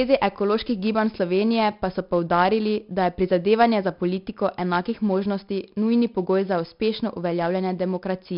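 4-bit ADPCM compression runs through the whole speech clip, from start to end. Each sample is coded as a coarse 4-bit jump from a predicted value, with the jump size adjusting on the fly, so the coding error rides along as a gritty hiss that swells with every loud syllable. The damage is heavy, with harshness on sudden onsets where the step lags behind. Nothing is present above 5.3 kHz, giving a dull, muffled top, which fits a rate near 44 kbps.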